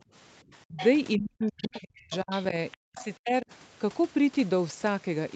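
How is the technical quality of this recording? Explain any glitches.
The recording has audible echo-canceller faults through its first three and a half seconds, heard against audio that stops at 8 kHz, as a call path does.

Background gated by the echo canceller: from 0.03 to 0.07 s the room sound drops by about 20 dB while the loudspeaker plays, then returns.

Speech suppressed in double talk: from 0.49 to 0.8 s and 1.17 to 3.51 s the speech dips, by roughly 25 dB and then up to 40 dB, likely from both sides talking at once.

Other side's voice leaking through: a second, quieter voice comes through at 0.77 to 0.87 s, 1.58 to 1.8 s and 2.11 to 3.06 s, about 10 to 20 dB below the speech, likely residual echo the canceller left in the microphone signal.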